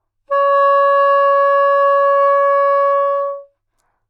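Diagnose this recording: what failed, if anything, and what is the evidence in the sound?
Nothing failed, and the sound gives no evidence of any fault in the recording.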